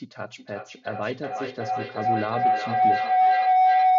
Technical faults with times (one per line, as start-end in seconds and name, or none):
0.36-3.98 feedback howl